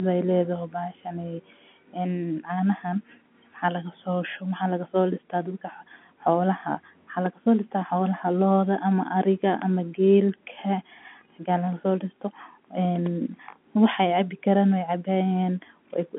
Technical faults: none

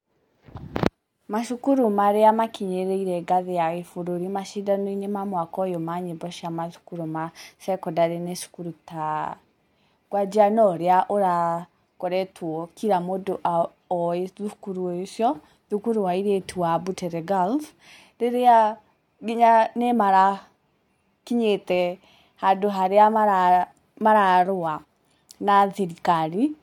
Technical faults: none

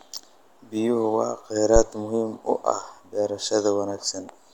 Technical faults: phantom power thump

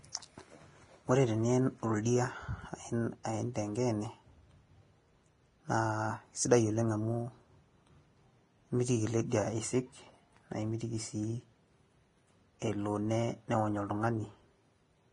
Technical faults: Vorbis compression

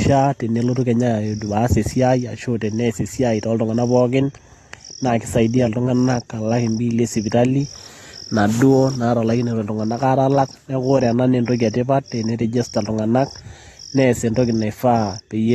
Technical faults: AAC compression

